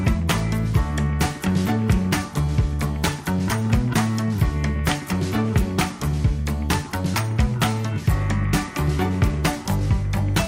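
From 0.12 to 10.47 s, clock slip clicks form a steady rattle, a one-sample slip about every 30 ms, likely from two unsynchronised clocks.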